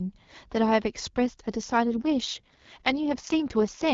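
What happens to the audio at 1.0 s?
Nothing goes wrong at 1.0 s; the speech there carries straight through, with only the light coding of the AMR wideband (HD Voice) codec at 12.65 kbit/s.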